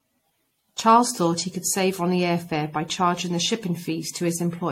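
Repeated lossy re-encoding, likely about five passes through an AAC-type codec at a rate near 64 kbit/s, causes generation loss across the whole speech recording. Each pass adds its own quantisation damage, so the sound is swirly and hollow, attacks are smeared, and nothing remains above 16.6 kHz.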